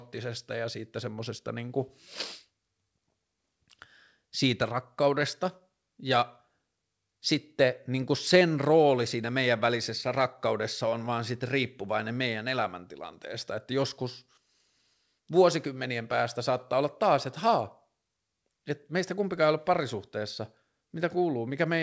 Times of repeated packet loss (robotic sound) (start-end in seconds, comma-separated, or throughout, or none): none